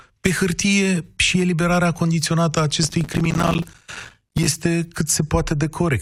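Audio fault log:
2.83–4.47 s, processor overload crackle: the speech breaks into a gritty crackle as the processor repeatedly misses its buffer deadlines. Around a hundred short silent dropouts, which fits buffers of roughly 5 ms, each with hard edges, run together into tearing that stops once the load passes.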